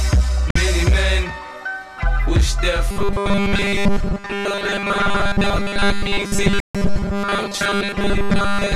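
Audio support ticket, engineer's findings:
Digital broadcast dropout at 0.51–0.56 s and 6.60–6.75 s: receiver muted on failed frames; about 48 ms then 144 ms lost, fitting two and six frames.

Robotic sound from repeated short buffers, 2.91 s to end: rigid 200 Hz metallic buzz over the sound, likely 5 ms buffers repeated with most real audio skipped.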